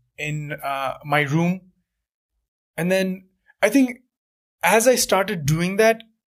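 Speech carrying sample clock jitter throughout: timing wobble of a microsecond or two adds hiss roughly 35 dB down, which rises with loud, bright syllables and disappears in pauses. On a spectrogram it shows as a faint haze filling the upper bands only while speech is present.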